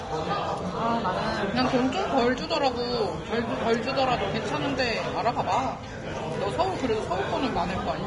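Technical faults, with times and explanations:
Throughout, Vorbis compression. Nothing is heard above 10.6 kHz, and the remaining treble is hissy and grainy. Tones sound roughened and attacks blurred. The likely cause is heavy Vorbis coding at a low bitrate, near 30 kbps, which quantises fine high-frequency detail into noise.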